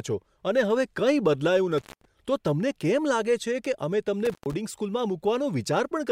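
A loose cable or plug in the chain of this speech recording is making intermittent contact, briefly breaking the signal path. The audio drops out with crackle at each edge and faint hiss between, for about 0.2 s from 1.78 s and about 0.12 s from 4.25 s.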